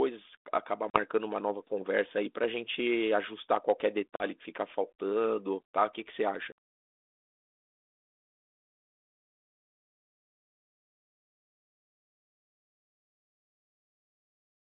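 Hard-edged dropouts at 0.9, 4.16 and 6.52 s, followed by slightly distorted speech, are packet loss on an ADPCM call. Roughly two or three packets went missing (about 40, 40 and 60 ms), knocking the 32 kbit/s G.726 decoder's predictor out of step until it resettled.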